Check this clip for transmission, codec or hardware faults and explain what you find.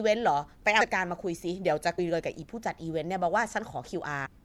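Compressed frames skipped at 0.80, 1.98 and 4.25 s: whole codec frames never reach the output, so the speech jumps ahead by roughly 200, 150 and 150 ms, consistent with blocks of about 26 ms. Overlapping neighbour frames turn each join into a short smeared blip, not a click.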